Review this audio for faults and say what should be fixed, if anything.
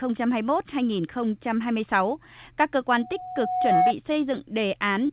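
Loudspeaker feedback squeal runs from 2.98 to 3.93 s. A single tone at 734 Hz swells over roughly 0.7 s until it sits a few decibels above the speech. A microphone is picking up the loudspeaker it feeds, and at 734 Hz the loop gain exceeds one, so that frequency keeps growing until the loop is broken. To prevent it, lower the loudspeaker gain, use headphones or move the microphone away, or apply a notch or feedback suppressor at 734 Hz.

Short stalls from late packets occur at 3.20 to 3.32 s, 3.25 to 3.31 s and 4.13 to 4.18 s. The sound is held for about 16 ms, 28 ms and 26 ms respectively, and little or nothing is lost. The jitter buffer ran empty when packets arrived late, so the receiver stretched the last sound until they came, adding that much delay each time. To prevent this, give the jitter buffer more headroom or reduce network jitter on the path.

Short concealed packet loss occurs at 5.06 to 5.12 s. 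About 30 ms of audio never reached the decoder, and the receiver filled roughly 28 ms of it by continuing the preceding sound, which is heard as a brief smear right at the end of the clip. Because the audio runs through a G.711 call path with nothing above 4 kHz, the concealment has only narrowband material to extend. To prevent it, add forward error correction or redundancy, or fix the loss on the network.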